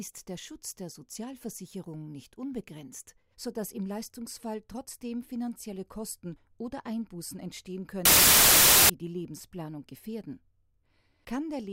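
From 8.05 to 8.90 s there is a wrong sample width fault: audio stored as 32-bit integers is read back as 16-bit. Each original sample splits into two values, one carrying the signal's top bits and one holding near-random low bits, so loud hiss buries a faint trace of the sound. Doubling the sample count halves the speed and drops the pitch an octave. The waveform shows a dense block, and the spectrogram shows broadband noise over faint, lowered structure.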